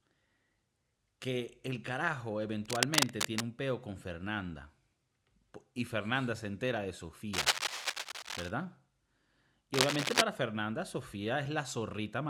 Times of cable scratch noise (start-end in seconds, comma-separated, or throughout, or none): 2.65-3.50, 7.33-8.50, 9.74-10.22